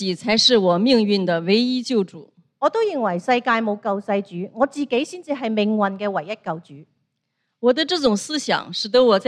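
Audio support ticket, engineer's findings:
Gritty, inharmonic fizz from 3.95 s to end, riding on loud and high-frequency sound. Crude rate conversion, probably linear interpolation without filtering, consistent with 44.1 kHz to 48 kHz. Periodic interpolation error creates unrelated tones roughly 40 dB below signal.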